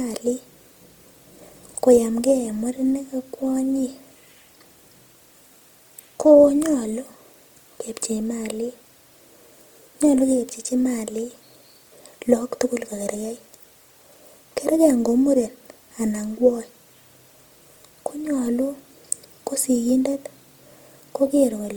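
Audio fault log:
throughout: Opus compression. The speech sounds plainly grainy, rough and noisy. This is likely Opus music mode filling starved bands with noise, which fits about 24 kbps.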